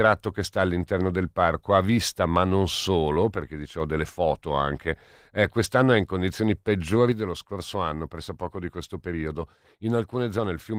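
Speech, carried through light Opus voice compression, has two sudden gain jumps: the level drops about 4 dB from 3.36 to 3.8 s, then about 6 dB from 7.12 s to the end. Background noise steps down in the same instant, unlike a fade or compressor, likely from unramped digital gain changes.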